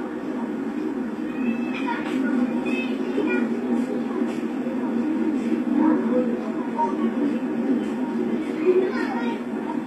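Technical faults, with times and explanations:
Throughout, HE-AAC compression, likely: the treble sounds gritty and metallic, as upper bands are rebuilt by copying lower ones instead of being coded, which fits a bitrate near 24 kbps. A spectrogram shows blurred, patterned high bands that stop sharply at 14.9 kHz.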